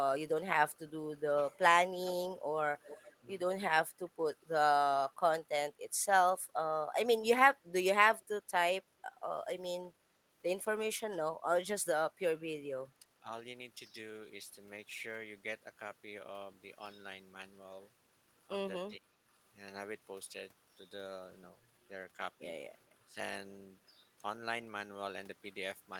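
From 2.84 to 3.16 s a faint copy of the voice trails 415 ms behind, about 20 dB down, likely an echo leak that a loudspeaker-side echo canceller failed to remove. At 3.2 to 3.29 s, 12.94 to 13.31 s, 18.96 to 19.18 s and 23.05 to 23.18 s the voice briefly dips by roughly 10 to 20 dB, likely speech suppressed in double talk when both sides spoke at once.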